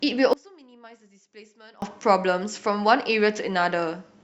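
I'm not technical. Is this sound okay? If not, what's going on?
No, not quite. From about 0.33 to 1.82 seconds the speech drops almost to nothing, leaving only a faint trace. That's likely one channel inverted: one side of the stereo is flipped upside down, so when both sides get combined, the voice cancels itself out.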